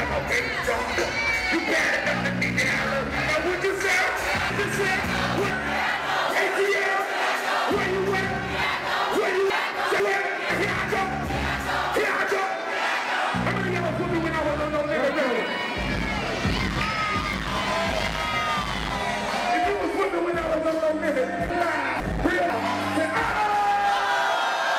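At 4.5 to 5.5 s, 9.5 to 10.5 s and 21.5 to 22.5 s the sound jumps out of sequence. These are chunks out of order: in each span a 500 ms block arrived one chunk late, so it plays after the block that should follow it. Nothing is missing, but the passage sounds jumbled, with three hard joins, for example 4.5, 5.0 and 5.5 s. A waveform or spectrogram shows abrupt discontinuities at those boundaries, with the two half-second segments visibly swapped.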